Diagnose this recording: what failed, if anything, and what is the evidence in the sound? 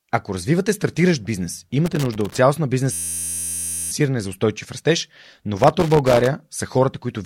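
Loose connector crackle sits in the analogue wiring: irregular scratchy bursts from 1.86 to 2.39 s, right after "развивате стартиращ бизнес", and from 5.57 to 6.28 s, after "за устойчив растеж". A dirty contact making and breaking chops the signal at random. Unlike a buffer fault, it has no steady rate.

A system hang loop follows in the driver or buffer stage. From 2.93 to 3.91 s, ending at "за устойчив растеж", one 11.61 ms slice repeats exactly at 86.1 Hz, heard as a steady buzz, which fits a 512-sample ring buffer cycling while the system froze. About a second of audio is lost. Its rigid periodicity separates it from crackle.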